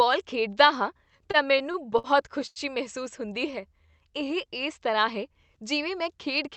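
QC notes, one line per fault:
0.97–2.59 s, repeated stalls (stutter): the audio halts about eleven times, the longest hold near 92 ms and roughly 265 ms in total, about 16% of the span. Each time late packets left the jitter buffer empty, so the receiver stretched the last sound, fading it on the longer waits. Nothing drops out, which sets this apart from packet loss with dropouts. The flow jerks in stops and starts rather than slowing evenly.
3.20–4.58 s, jitter buffer slow-down: the audio runs at about 88% speed, gaining about 176 ms, with sounds drawn out at unchanged pitch, heard through the call path's Opus coding with its top end cut at 8 kHz. The buffer was rebuilding its reserve by repeating single pitch periods and bits of pauses. Unlike the stutter, there are no halts or fades, only a steady, even drag.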